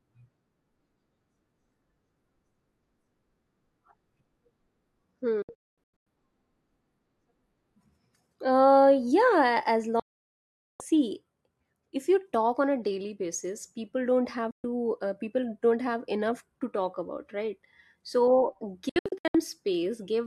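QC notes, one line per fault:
5.42–6.07 s: digital broadcast dropout, scattered muting. About 480 ms is lost in several holes over 640 ms, the longest 224 ms, with near-instant 3 ms fades.
10.00–10.81 s: digital broadcast dropout. The receiver mutes for a continuous 800 ms after losing good frames, and the programme resumes later with that stretch missing.
14.51–14.64 s: digital broadcast dropout. A 128 ms hole between "daily basis people don't" and "to uh people don't". The receiver mutes abruptly, and the sent audio is gone.
18.89–19.35 s: digital broadcast dropout, broken into short holes. About 288 ms is muted across 448 ms, no hole longer than 64 ms, in steps that fit 32 ms frames.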